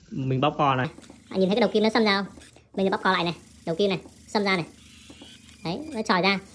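Wrong sample rate from 0.85 s to the end at 6.54 s: the audio is played back faster than it was captured, with no conversion, consistent with 16 kHz material run at 22 kHz. Everything moves 1.38 times too fast and sits about 5.5 semitones higher, sounding hurried and high.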